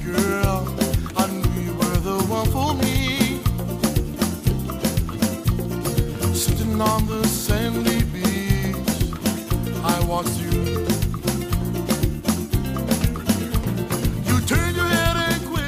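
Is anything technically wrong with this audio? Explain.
No, nothing technically wrong can be heard anywhere in this audio.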